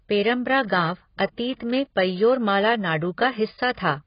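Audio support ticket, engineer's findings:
Speech dull and smeared throughout, nothing above 5.1 kHz. Sibilants fizzy, sustained vowels warbling. Spectrogram: hard flat ceiling at 5.1 kHz, patchy holes and blotchy noise-filled bands below it. Likely AAC compression (AAC-LC) at a low bitrate, consistent with about 16 kbps: cut-off lowered and coarse per-frame quantisation starving bands, causing heavy damage.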